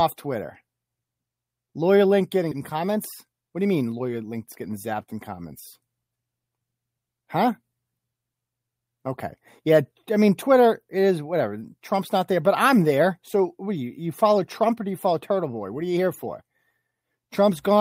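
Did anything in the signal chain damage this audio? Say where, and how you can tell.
Yes. Skip ahead at 2.51 s: in the network or at the jitter buffer, roughly half a second of speech was discarded, and the two sides of the jump join directly with no gap.

Jitter buffer speed-up from 2.60 to 4.95 s, ending just before "in comments": the buffer trimmed pitch periods, about 200 ms in all, so speech runs 7% faster and sounds hurried at unchanged pitch.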